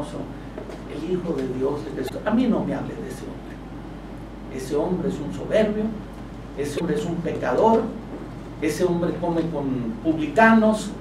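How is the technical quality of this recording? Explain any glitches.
Two short glitches mar the recording. Damaged data in a compressed stream occurs at 2.05–2.11 s and 6.75–6.81 s: corrupted bytes make the decoder misread those frames and lose sync until it finds a valid frame header, producing brief blips about 55 ms long.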